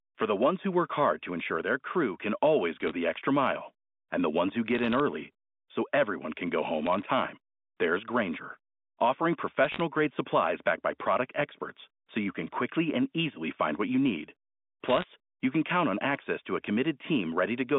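Short bursts of bit errors on a digital phone line occur at 2.81–2.91 s, 4.75–5.00 s, 6.86–7.02 s, 9.65–9.80 s and 14.85–15.04 s. Flipped bits in the A-law coded stream corrupt individual samples, and hits on the sign or upper bits produce sharp ticks that cluster into crackle over the intact speech. The error rate is a few tenths of a percent and heaviest in the last two bursts. The narrow band, roughly 200 Hz to 3.6 kHz, fits a standard G.711 line.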